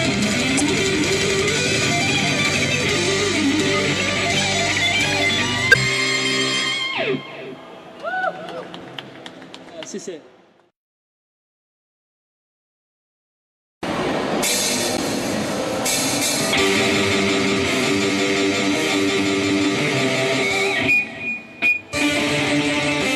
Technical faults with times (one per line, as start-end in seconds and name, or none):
0.56-0.61 damaged data in a compressed stream
5.71-5.75 damaged data in a compressed stream